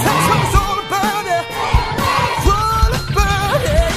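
From the start to 2.5 s the audio shows an adaptive stream starting at a low bitrate: the player began on a lean version to start quickly, and the dull, smeared top end fits something like 40 kbit/s HE-AAC with synthesised treble. At 2.5 s it switches without a gap to a cleaner version, consistent with roughly 96 kbit/s AAC-LC. On a spectrogram, the upper band looks patchy and copied before 2.5 s, then suddenly fills in with real detail.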